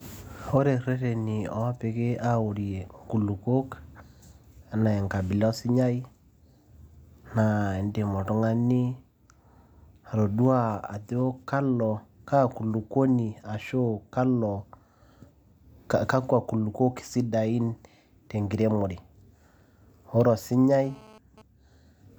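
From 20.84 to 21.42 s, GSM phone buzz breaks in. A nearby phone's 217 Hz transmit bursts get rectified, producing a raspy, harmonic-rich buzz about 25 dB below the speech.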